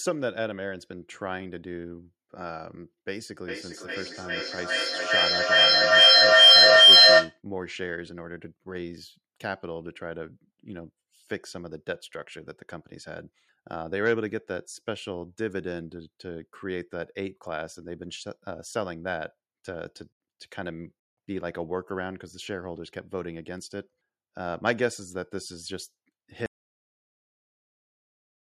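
Feedback howl runs from 3.33 to 7.42 s: a microphone is picking up a loudspeaker carrying the same call, and each pass round that loop returns louder, narrowing to a tone near 3 kHz that pulses roughly every 0.4 s and peaks about 18 dB above the speech.

An audio dropout to silence starts at 26.46 s and lasts to the end: the speech stops abruptly and gives way to silence with no room tone, most likely because the input was lost while recording continued.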